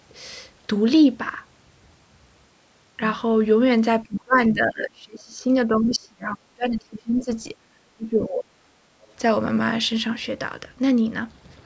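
From 4.03 to 5.5 s, 5.67 to 7.28 s and 7.71 to 8.73 s, the speech is suppressed in double talk. It dips by up to about 30 dB, fades and breaks into pieces, most likely because the echo canceller mistook overlapping talk for echo. A waveform would show the envelope collapsing in ragged gaps, and a spectrogram would show the harmonics thinning out.

Brief scraps of the other side's voice leak through at 4.16 to 4.21 s, 7.18 to 7.25 s and 9.02 to 9.13 s, faint at about 20, 25 and 35 dB below the speech. This is likely residual loudspeaker echo that the canceller missed. On a spectrogram these scraps appear as short, weak, unrelated harmonic streaks under the 8 kHz ceiling left by the call's microphone processing.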